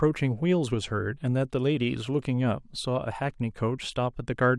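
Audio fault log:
No faults were found anywhere in this speech clip.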